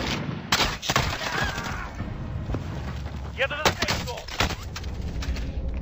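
Stereo read as mono runs throughout: interleaved left and right samples play as one channel, so the sound runs at half speed, an octave low, with a faint mirrored image higher up.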